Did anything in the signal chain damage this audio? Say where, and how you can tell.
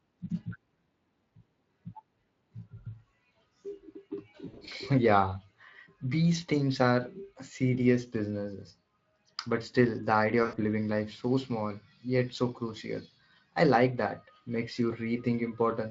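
Yes. At 4.47–4.73 s, and at 10.43–10.56 s between "still the idea" and "living life so small", the speech smears into a fading buzz and comes back weak. That is VoIP packet loss concealed by the speech codec: on the network stage, the Speex decoder stretched its last pitch and filter over missing packets, lowering gain each frame.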